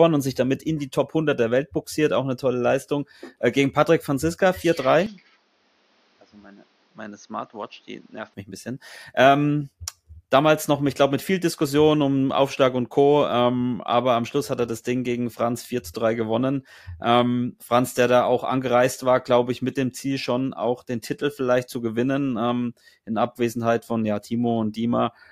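From 5.06 to 8.34 s the speech turns dull and boxy, with nothing above 6.6 kHz. It drops a few decibels and gains a faint new noise floor. There is no gap. The dull sound begins just before "mich ein bisschen", and clarity returns at 8.34 s. Likely cause: input switched to a poorer device.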